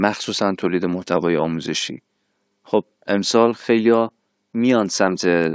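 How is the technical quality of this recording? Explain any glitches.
Quality drops in the last couple of seconds of this speech recording. Resampler restarted on every block, 3.22 to 5.55 s: each 20 ms block was converted separately, leaving edge errors heard as a 50 Hz buzz beneath the speech.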